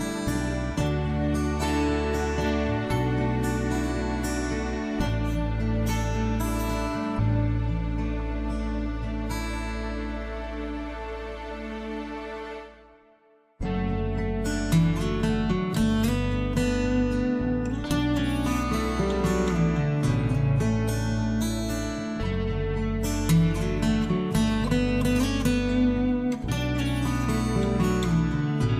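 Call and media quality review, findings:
DAB burbling at 8.2 s. Brief noise blips in single sub-bands. Probable component: DAB receiver/MP2 decoder. Weak reception lets residual bit errors (around 0.15 percent) past error correction; corrupted scale factors make isolated sub-bands jump in level. Unlike packet-loss dropout: no gap or repeat, just sub-band-limited noise blips.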